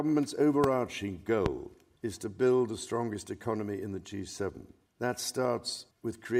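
There are two loud pops, at 0.64 and 1.46 s, each a sharp jolt about 20 dB over the sound, likely a voltage spike from a plug, switch or static discharge.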